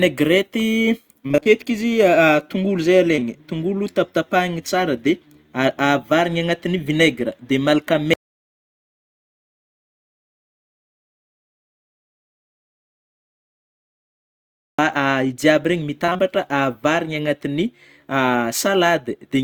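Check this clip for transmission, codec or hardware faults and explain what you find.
Three kinds of fault are present: two bursts of repeated packet loss, a pair of short concealed losses, and a long audio dropout to silence.

Repeated packet loss (robotic sound) hits from 1.27 to 1.48 s and again from 16.05 to 16.24 s. Packets failed to arrive again and again in each stretch. The receiver patched each hole by extending the previous sound. About half of each span is synthetic fill, with gaps up to 23 ms. The first burst points to about five lost packets, the second to about four. The speech turns choppy there.

Short concealed packet loss occurs twice back to back, from 3.16 to 3.19 s and from 3.19 to 3.23 s. Each time, about 20 ms of audio missed the decoder. The decoder bridged the gap by continuing the last sound, then blended back into the real signal. Together they make a brief smear or wobble of roughly 40 ms.

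An audio dropout to silence runs from 8.14 to 14.79 s, about 6.65 s. The speech cuts off abruptly and returns mid-flow. The gap is silent, with no room tone at all. Whatever was said in that stretch is lost. The cause is likely a lost input, such as a disconnected device, a failed link or an accidental mute, while recording carried on writing silence.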